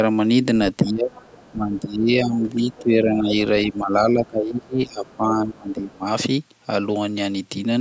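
From 0.83 to 1.13 s the speech dips hard, around 20 dB at its worst, and it ducks again at 1.51–2.48, 2.79–3.32, 3.7–3.94 and 4.11–6.06 s, the last a long two-second sag. That's speech suppressed in double talk, likely the echo canceller turning everything down while both ends talk. Meanwhile the other side's voice leaks through as faint scraps at 1.12–1.52, 1.76–1.89 and 2.7–2.79 s, roughly 25 to 35 dB under the talker, presumably loudspeaker echo the canceller didn't fully remove.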